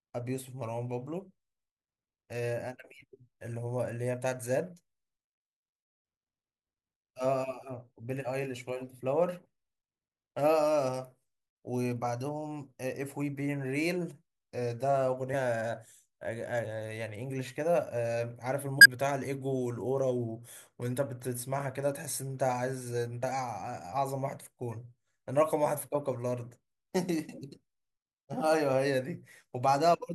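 The speech has compressed frames skipped at 15.33, 18.79 to 18.86 and 23.22 s. Missing or rejected frames make it jump ahead roughly 70, 50 and 20 ms.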